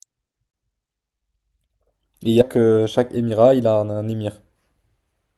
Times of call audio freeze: none

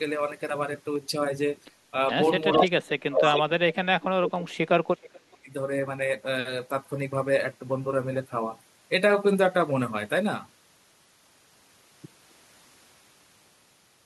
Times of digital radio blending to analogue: none

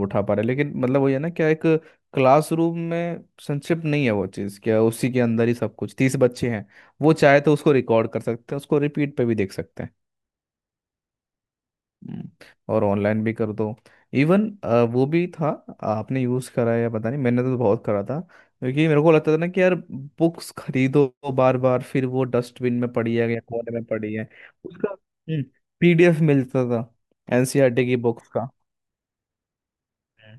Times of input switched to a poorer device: none

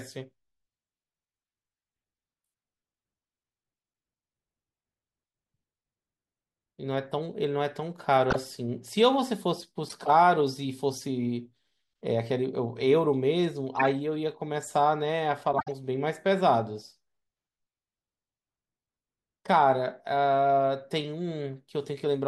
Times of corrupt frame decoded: 8.30-8.36, 9.88-9.92, 13.77-13.87, 15.52-15.72

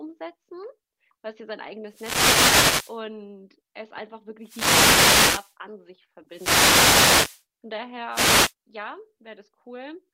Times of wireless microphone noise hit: 1.87-3.01, 4.40-5.56, 6.28-7.45, 8.11-8.54

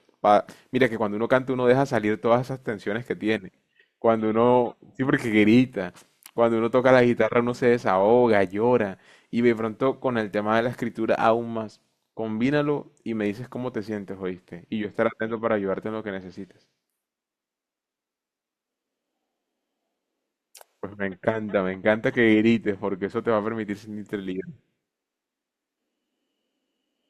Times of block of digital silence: none

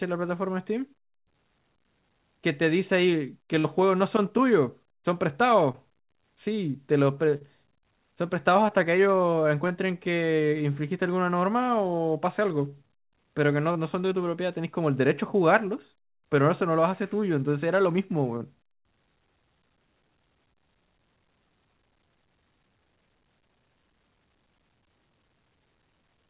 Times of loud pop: none

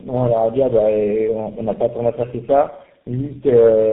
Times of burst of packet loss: none

